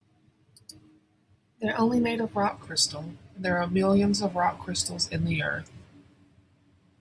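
From 2.49 s to the end, a wrong sample rate slows the speech to 0.92 times speed and drops pitch about 1.5 semitones, which fits 24 kHz audio played at 22 kHz.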